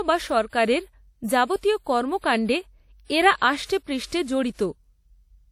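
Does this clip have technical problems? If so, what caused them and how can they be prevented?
Yes. Throughout, the speech rings and sounds washy, with hiss that breathes with the signal and nothing above 16.9 kHz. This is likely WMA compression at a rate that fits about 48 kbps. Its long transform blocks smear quantisation noise, unlike steady background hiss. Encoding at a higher bitrate prevents it.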